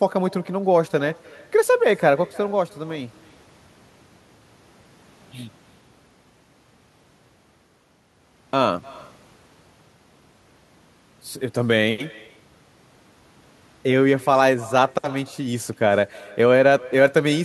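Throughout the recording there is echo with no canceller: the far end's loudspeaker feeds back into its microphone and nothing strips it out. Every phrase of speech returns roughly a third of a second later as a thin shadow about 24 dB quieter.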